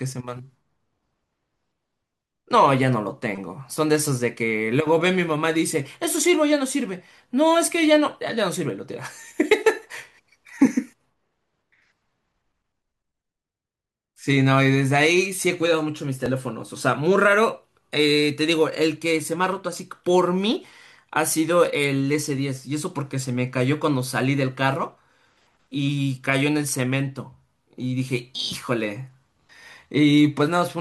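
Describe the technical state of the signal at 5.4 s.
At 5.4 s the speech comes through intact, with no dropout, click, distortion or other fault audible at that moment.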